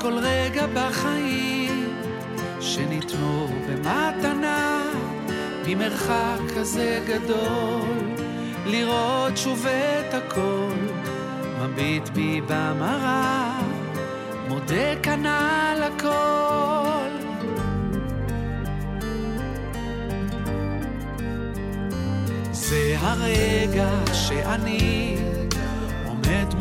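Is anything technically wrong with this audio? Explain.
No, nothing technically wrong can be heard here.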